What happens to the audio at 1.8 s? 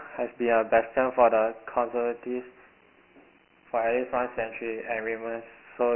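At 1.8 s you're hearing the Dialogic VOX ADPCM coding that runs through the whole clip. Each sample is squeezed to a 4-bit step, which fits a 24 kbps, 6 kHz-rate file, so nothing survives above 3 kHz and a heavy, gritty hiss rides along with the speech.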